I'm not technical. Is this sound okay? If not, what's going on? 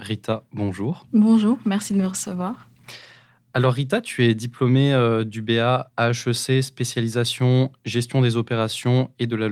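No. A call bitrate drop from 1.81 to 4.69 s makes the speech sound rough and muffled: the connection briefly squeezed the audio into far less data, recovering just before "euh du".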